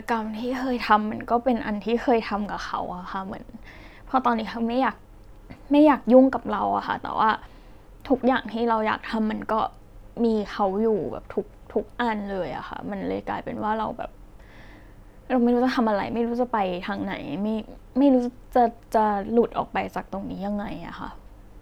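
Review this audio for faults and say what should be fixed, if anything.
Nothing to fix; no faults found in the speech recording.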